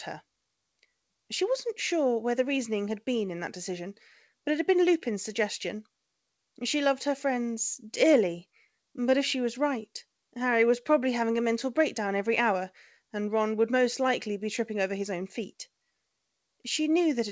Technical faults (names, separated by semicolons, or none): none